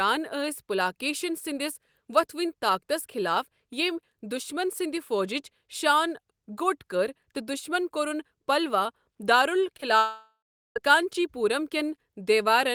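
Just after "پلوا دارُل", two short concealed packet losses arrive back to back, at 9.77 to 9.81 s and 9.81 to 9.84 s. About 20 ms of audio went missing each time, and the receiver covered the holes by extending the preceding sound, leaving a quick smear and wobble.

From 9.98 to 10.78 s comes what is likely a long network dropout. The sound continues as an artificial buzz or hiss that fades into roughly 0.4 s of silence, then resumes about 0.8 s later with that stretch gone.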